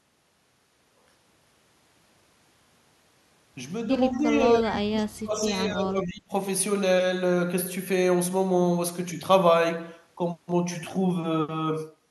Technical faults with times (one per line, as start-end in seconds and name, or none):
4.13-4.17 echo leak
4.17-6.33 speech suppressed in double talk